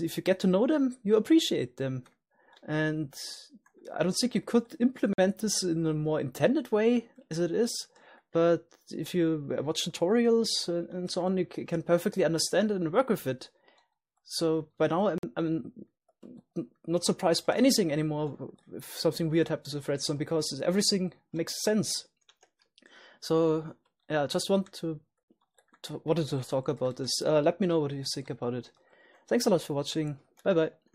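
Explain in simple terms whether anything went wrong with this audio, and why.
A gap between chunks interrupts the sound at 5.13 and 15.18 seconds. Each 50 ms silence falls about 10 seconds apart, yet nothing is lost.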